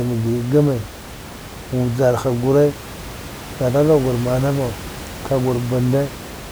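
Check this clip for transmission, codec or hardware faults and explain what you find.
Nothing stood out on listening to this speech, apart from the room's own background noise sitting about 15 dB below the talker.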